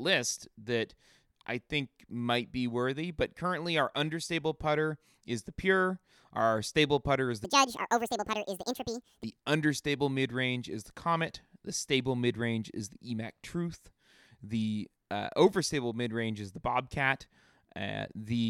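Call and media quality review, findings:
Section at the wrong speed, 7.45 to 9.24 s. Speech runs hurried and raised about ten semitones, played at 1.77x, snapping back at both edges. Likely cause: resampling or playback clocked at the wrong rate for that segment. Tempo and pitch shift together, which separates it from pitch-shift processing, where timing stays put, and from time-stretch or packet-loss compression, where timing changes but pitch holds.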